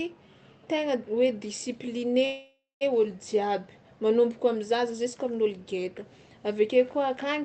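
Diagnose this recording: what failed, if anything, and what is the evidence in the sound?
The failure is a call audio freeze in the network and jitter-buffer stage of a band-limited call path, most likely caused by delayed packets. From 2.25 s to 2.83 s the audio stops advancing. The receiver stretches the last sound into a fading buzz or hiss that ends in about 0.22 s of silence. Playback then resumes where it left off, so roughly 0.56 s of gap has been inserted, everything after it arrives that much later, and no content is lost.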